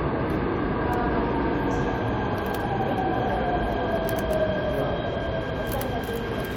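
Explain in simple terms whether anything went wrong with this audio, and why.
Nothing went wrong: no technical fault can be heard anywhere in the recording.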